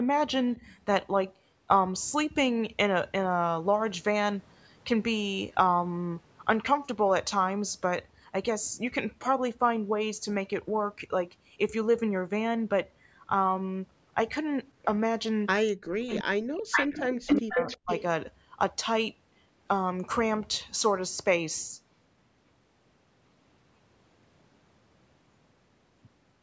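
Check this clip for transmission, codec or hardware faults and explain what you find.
Two kinds of fault appear, one brief pair near the start and a dense cluster between about 15.7 and 18.0 s.

Speech suppressed in double talk: at 0.57–0.61 s the level dips by about 5 dB. At 15.7–17.0 s, 17.26–17.66 s and 17.83–17.9 s the speech nearly vanishes, about 35 to 40 dB down. The likely cause is an echo canceller treating overlapping talk as echo. The waveform envelope collapses, and the spectrogram shows blank gaps.

Echo leak: at 0.67–0.75 s and 16.15–16.19 s, a faint repeat about 30 and 20 dB down trails the speech by 339 ms. At 16.76–17.15 s and 17.55–18.02 s, a copy at roughly equal level arrives 432 ms late. This is likely loudspeaker pickup the canceller missed. The spectrogram shows duplicated harmonic patterns shifted in time.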